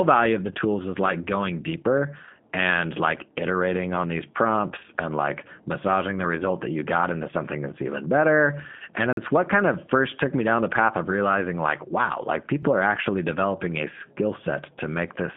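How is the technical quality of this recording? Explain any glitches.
Technical quality is limited by plainly audible low-bitrate speech coding throughout, plus two brief dropouts.

G.729 codec: the whole clip passed through a G.729 speech codec, which rebuilds speech from a filter-and-pulse model. This leaves audibly rough, synthetic speech in a 150 Hz to 3.5 kHz band, with nothing above 3.6 kHz. That fits an 8 kbit/s VoIP link.

Block of digital silence: the output buffer probably went unfilled, so samples were zeroed abruptly. From 9.13 to 9.17 s this leaves a 44 ms hole, and at 12.63 s a 3.5 ms gap heard as a tick.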